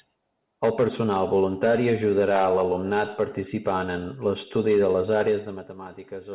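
No faults in this speech; the band stops at about 4 kHz, which fits a narrowband call codec such as G.711 at 64 kbps.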